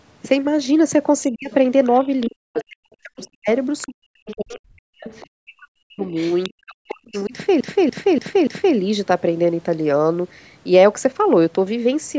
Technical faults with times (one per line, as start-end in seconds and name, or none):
1.31-1.51 speech suppressed in double talk
1.51-2.64 other side's voice leaking through
2.06-7.33 speech suppressed in double talk
3.23-5.27 other side's voice leaking through
6.15-7.28 other side's voice leaking through
7.61-8.76 CD stuck on one turn